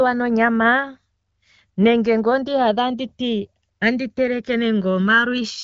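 Right from the start and running the whole way through, the two channels are drifting apart. Each side seems to have been captured on its own clock, with the two clocks disagreeing by something like 150 ppm, so the delay between them creeps up to a bit under a millisecond by the end. Fold it to mono and the comb notches glide slowly across the spectrum, giving the speech a slow, swirling flange. The top end stops around 7.5 kHz, with the light wideband-codec texture you'd expect from AMR-WB (HD Voice), which sounds like a mid rate such as 12.65 kbit/s.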